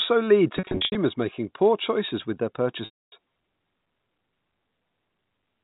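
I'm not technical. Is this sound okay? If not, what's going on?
No. There is packet loss with pitch repetition: pieces of the audio went missing in transit, and the receiving end covered each gap by repeating the last bit of voice and fading it away. From 0.57 to 0.95 s the losses are short and scattered, so the sound seems briefly held and buzzy. From 2.85 to 3.12 s the gap is longer and fades toward silence. Unlike a plain dropout, the gaps are filled rather than abruptly silent.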